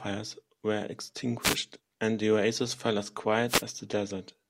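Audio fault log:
1.40–1.58 s and 3.47–3.63 s: wireless microphone noise hit. Two short bursts of static break into the speech, each under a fifth of a second. The analogue FM radio link from the microphone loses strength for a moment. Reflected signals arrive out of step and cancel the direct one. The receiver then has too little signal, so its own hiss rises. This is heard as a brief swish.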